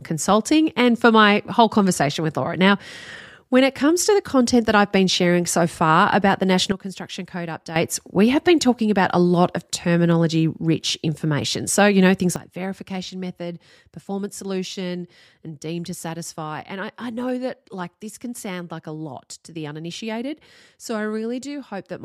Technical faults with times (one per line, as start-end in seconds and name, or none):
6.72-7.76 sudden gain jump
12.36-22.05 sudden gain jump